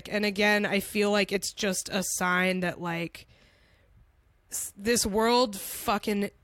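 No technical faults are audible.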